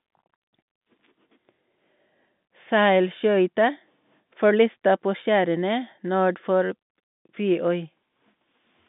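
Nothing here is wrong: it's speech carried over an ordinary G.711 telephone line, with the band running from about 150 Hz to 3.6 kHz and nothing above 3.8 kHz, which fits a 64 kbps mu-law connection doing just what it's meant to.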